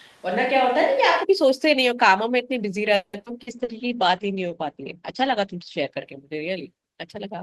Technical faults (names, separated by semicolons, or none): switch to a distant microphone; call audio freeze; skip ahead; jitter buffer slow-down; short concealed packet loss; call bitrate drop